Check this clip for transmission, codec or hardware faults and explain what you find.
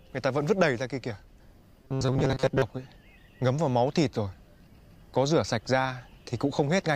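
One fault is audible. From 1.82 to 2.62 s, robotic sound from repeated short buffers: likely starved playback looping a 7.5 ms fragment, imposing a metallic 133 Hz buzz, with rigid, evenly spaced spectrogram lines.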